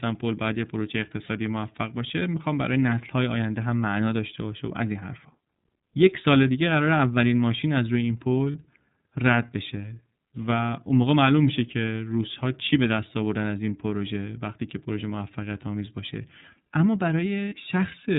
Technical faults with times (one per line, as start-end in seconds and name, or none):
0.00-18.18 iLBC codec
1.25-1.29 lost iLBC frames
8.52-8.55 lost iLBC frames
17.49-17.52 lost iLBC frames